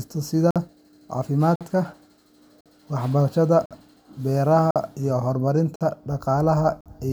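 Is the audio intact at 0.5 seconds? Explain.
No. A 50 ms hole of silence cuts the speech from 0.51 to 0.56 s: a gap between chunks, where silence is left at the join between 1-second chunks.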